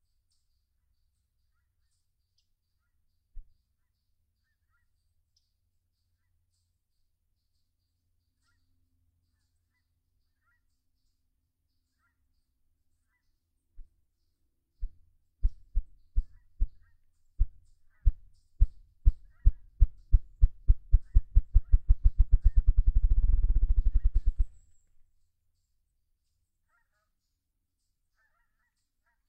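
No technical faults can be heard anywhere in the recording; the signal holds steady throughout.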